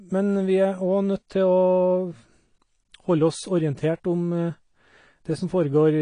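From start to finish the speech sounds dull and smeared, with nothing above about 9.8 kHz and a fizzy, warbling texture on sibilants and held sounds. The damage is plainly audible throughout. This is likely AAC compression, with the AAC-LC encoder working at a bitrate low enough, consistent with roughly 32 kbps, that it drops the top of the spectrum and quantises the remaining bands coarsely, leaving gaps that shimmer.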